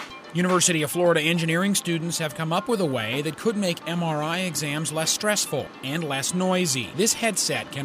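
No technical faults can be heard anywhere in the signal.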